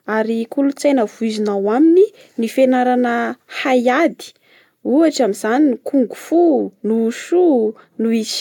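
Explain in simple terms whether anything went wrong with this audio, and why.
Nothing went wrong: the speech comes through with no technical fault anywhere in the recording.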